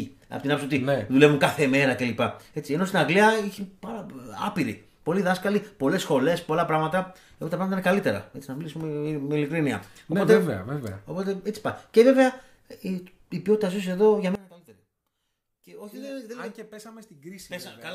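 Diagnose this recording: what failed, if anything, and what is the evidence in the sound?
From 14.35 s to the end, the level falls by about 20 dB and nearly everything vanishes. This is likely one channel inverted in the analogue wiring: summed to mono, everything common to both channels cancels. The waveform shrinks abruptly there.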